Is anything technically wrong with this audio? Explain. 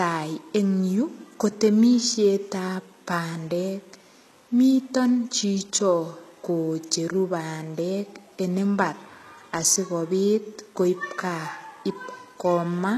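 Yes, there's plainly audible codec damage across the whole speech clip, and it sounds like HE-AAC compression. The treble is there, but it has that synthetic, gritty edge: s sounds come out lispy and metallic, because the top end is likely rebuilt by copying lower bands upward rather than coded directly. The harmonics don't line up across that seam. Nothing makes it past about 12.4 kHz, and the damage fits a very low bitrate, around 16 kbps.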